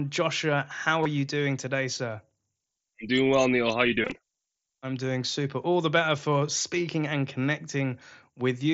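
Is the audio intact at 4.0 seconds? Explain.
No. From 4.02 to 4.12 s, concealed Bluetooth headset packet loss: headset-to-phone packets dropped, 52.5 ms lost across 90 ms, and the receiver patched each gap by repeating a best-matching stretch of recent waveform. No gap runs over 15 ms.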